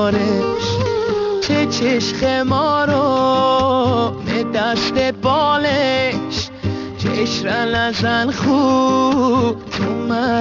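Aliasing runs through the whole clip, from start to finish. The audio was taken down to a much lower sample rate, which fits a drop to around 12 kHz, with no filter first to remove content above the new limit. Everything above about 6 kHz folds back down into the band at unrelated, wrong frequencies, sitting only some 15 dB under the wanted sound. Sibilant and bright material turns gritty and metallic, and the spectrum runs hard right up to 6 kHz.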